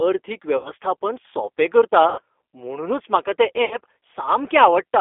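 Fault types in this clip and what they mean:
G.729 codec: The whole clip of speech passes through this 8 kbit/s VoIP codec. It rebuilds each 10 ms frame from a vocal tract filter, a pitch predictor and a few coded pulses. The line band runs from about 300 Hz to 3.5 kHz, and the codec damage is plainly audible as a rough, slightly synthetic texture. Plain telephone band-limiting would sound thin but smooth, so that texture is what marks a low-rate codec.
VoIP packet loss concealed by the speech codec: At 0.57 to 0.71 s, 2.10 to 2.20 s (just before "म्हुणूनच म्हाका") and 3.65 to 3.77 s, the decoder extrapolates from its last pitch and filter, stretching the sound as its gain is lowered frame by frame. The first two gaps cover about 80 ms of lost audio each, which fits four packets, and the third covers about 60 ms. A simple dropout would go silent instead, and here the sound stays weak a little after each gap.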